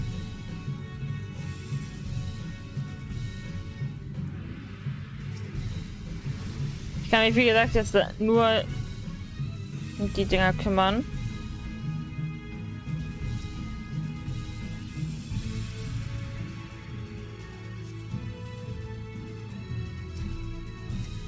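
No technical faults can be heard in this audio; it has come through a working call path with wideband coding, which fits G.722, and it carries nothing above 8 kHz.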